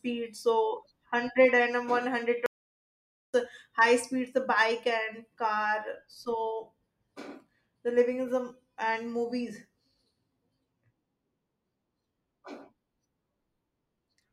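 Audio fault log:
2.46–3.34 s, audio dropout to silence: the speech cuts off abruptly and returns just as suddenly after about 0.88 s of dead digital silence, with no room tone beneath it. The input was likely lost briefly while the recorder kept writing silence.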